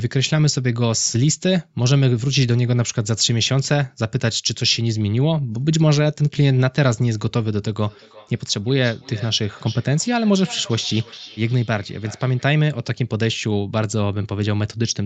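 From 7.76 to 12.55 s, a second device in the same room is playing this call back aloud, and the microphone picks that playback up again; its echo canceller cannot remove sound it did not play itself, so a feedback echo between two devices forms. Each stretch of speech returns at a fixed interval of roughly 300 ms, reaching about 19 dB below the speech, heard as a trailing copy. Throughout, the speech stops at 8 kHz, which fits an Opus call path.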